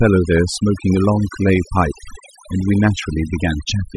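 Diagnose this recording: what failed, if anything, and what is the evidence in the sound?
Overdone noise removal throughout, at the call-processing stage: a noise suppressor set too aggressively gates bands near its noise estimate, leaving twinkling residue in the background.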